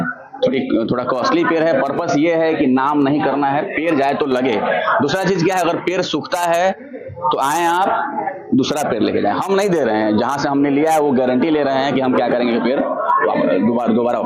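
Gain pumping runs through the whole clip, with a level swing of around 10 dB. Loud and quiet passages sit unnaturally close together, giving a squashed feel. The likely cause is input gain set far too high, with a fast limiter or compressor clamping down on each peak. A noise gate would behave differently, cutting the gaps toward silence rather than letting the background rise in them.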